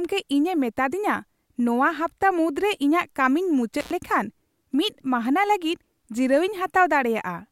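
At 3.80 s an intermittent contact opens a loose connection for about 98 ms, cutting the speech out until 3.91 s, with crackle at both edges and faint hiss between.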